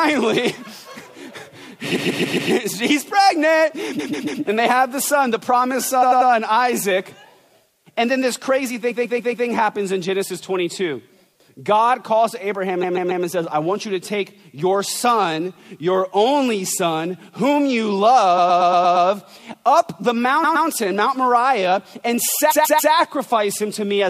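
Repeated frames stutter the sound at 1.95, 3.98, 6.01, 8.90, 12.82, 18.37, 20.43 and 22.50 s. Each time, a short block of compressed audio, 93 to 139 ms, is decoded again two to six extra times. The loop stretches the clip by 0.23 to 0.70 s per event.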